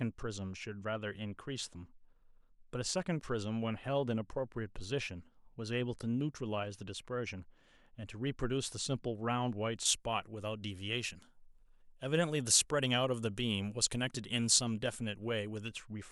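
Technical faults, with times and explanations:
9.85 to 15.68 s, pre-emphasis left on: the treble lift matching an FM 75 µs curve stays in place without the complementary de-emphasis, leaving 10 kHz about 14 dB above 1 kHz, so the speech turns thin, glassy and harshly sibilant.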